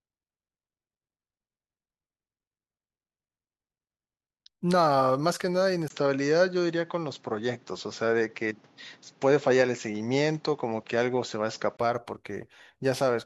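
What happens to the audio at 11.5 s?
At 11.5 s the speech sounds dull, with nothing above 7.6 kHz. This lasts from 5.88 to 11.79 s. An input switched to a poorer device is the likely cause. A 20 ms gap, a small level shift and faint new background noise mark its start.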